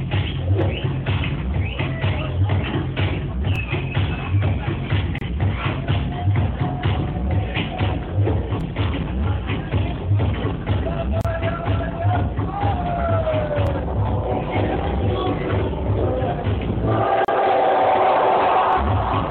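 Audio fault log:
3.56, 8.61, 13.67 and 18.73 s: overlapping chunks. The audio was handled in 5-second chunks, each starting 25 ms before the previous one ended, so that 25 ms slice plays twice at every join. It is heard as a brief stutter recurring every 5 s.
5.18, 11.21 and 17.25 s: gap at a join of encoded pieces. The 6-second pieces were encoded separately and joined untrimmed, keeping encoder start delay and final-frame padding. Silences of 27.5, 34.3 and 34.3 ms break continuous sound with smeared edges, then it resumes where it stopped.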